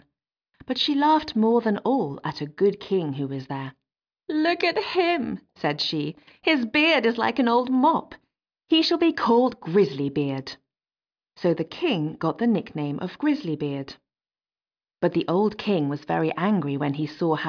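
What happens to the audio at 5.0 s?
Nothing goes wrong at 5.0 s; the audio runs through that moment intact, with no dropout, click or other fault to be heard.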